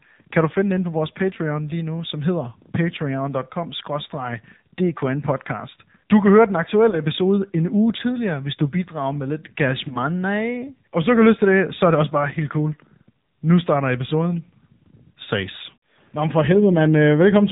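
Throughout, the speech is boxed-in and buzzy, with nothing above 4 kHz and a synthetic edge on every syllable. That is the AMR narrowband mobile codec at 7.4 kbps. The telephone-band audio is rebuilt from a vocal-tract model fed by a few pulses per subframe, and at this low rate the damage is plainly audible.

Three brief warbling dips interrupt the audio. The first runs from 6.90 to 7.00 s, between "kan høre den" and "en uge tidligere hvis". The second runs from 9.88 to 9.97 s, and the third from 15.24 to 15.28 s. Each is a single lost AMR speech frame, about 20 ms of audio. The decoder filled each gap by repeating the last good pitch and vocal-tract settings at lower gain, so the sound smears briefly before recovering.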